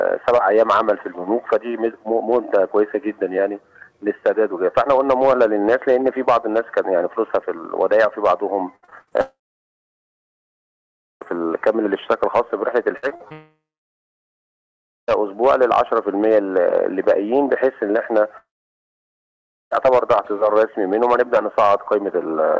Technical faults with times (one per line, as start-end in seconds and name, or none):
8.76-9.13 repeated packet loss (robotic sound)
9.21-11.23 long network dropout
12.97-13.32 repeated packet loss (robotic sound)
13.32-15.22 long network dropout
18.38-19.73 long network dropout